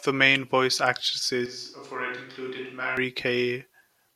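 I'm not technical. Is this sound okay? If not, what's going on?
No. From about 1.46 s to 2.97 s the recording likely stopped using the close microphone and fell back on one further away, a switch to a distant microphone. During that stretch the speech suddenly sounds roomy and hollow, thinner in the low end, noticeably quieter, and with more background noise from the room. At 2.97 s it snaps back just as abruptly to the closer, fuller sound.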